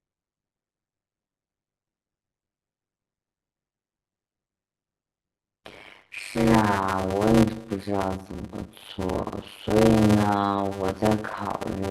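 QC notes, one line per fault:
Throughout: block size mismatch (padded). Each block carries fewer samples than the next stage reads, which fits 256-sample writes, and the remainder is filled with silence. The speech runs at about 0.53 times its normal speed with a steady 100 Hz buzz from the repeating gaps. Unlike a sample-rate mismatch, the pitch stays roughly normal, and unlike random dropouts, the gaps are perfectly regular.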